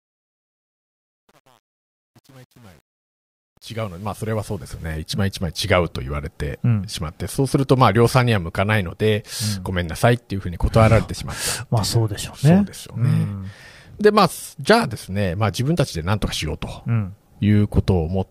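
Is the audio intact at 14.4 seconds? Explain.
Yes, the speech at 14.4 seconds is intact, with no audible fault at that moment.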